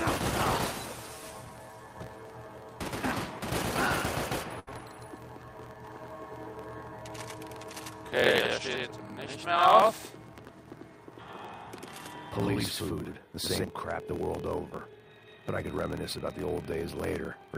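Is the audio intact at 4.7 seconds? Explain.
No. The audio is not intact at 4.7 seconds, which is the end of a burst of packet loss spanning 4.59 to 4.70 s. The receiver carried the last sound forward for about 74 ms while turning it down, then resumed with about 60 ms of the original skipped. On a spectrogram this looks like a frozen, smeared band that fades, then an abrupt jump. The waveform shows a decaying, repetitive stretch before the sudden restart.

The same moment also carries a block size mismatch (truncated) that runs through the whole clip. The end of every block is discarded, which fits a 1024-sample read size. That produces a 43.1 Hz buzz and playback 1.12 times faster at roughly normal pitch. A spectrogram shows vertical striping about every 23 ms, and the waveform has regular discontinuities at those joins.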